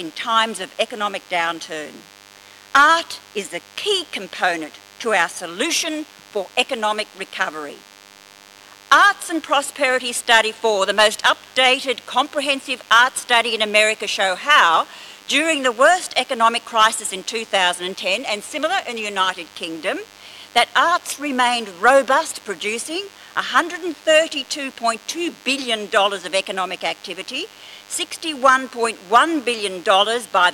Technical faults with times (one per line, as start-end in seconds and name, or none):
0.00-30.54 DECT cordless phone buzz
23.89-24.55 CD scratch ticks